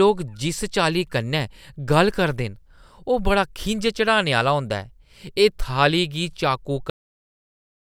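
At 6.90 s the speech stops abruptly mid-sound and falls straight to digital silence: a cut-off end, where the final buffers were never written or played out.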